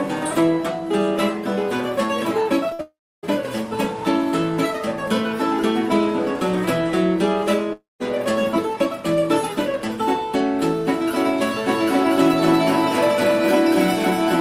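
The audio breaks up around 2.69 s, starting with short concealed packet loss: about 20 ms missing between 2.69 and 2.73 s, patched into a brief smear rather than a clean cut. A burst of packet loss follows from 2.73 to 2.81 s. Roughly 60 ms is gone, and the patch is the last sound held and fading, which lasts longer than the single smear. At 2.81 to 3.25 s and again at 7.73 to 8.02 s, the sound stretches briefly and then falls to silence for about 0.29 s and 0.18 s respectively. These are likely long network dropouts, and their true gaps of about 420 ms and 280 ms go on past where the concealment gives out. From 11.69 s to the end there is a doubled audio track: a full-band copy about as loud as the original trails roughly 200 ms behind. It starts abruptly and has no decay or room colour, so it is not reverb. The likely cause is a second, slower capture path or two misaligned copies in an edit.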